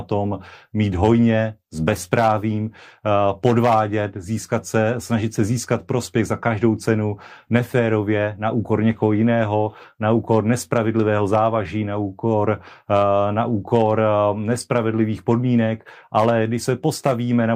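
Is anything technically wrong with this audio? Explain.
No, nothing technically wrong can be heard here.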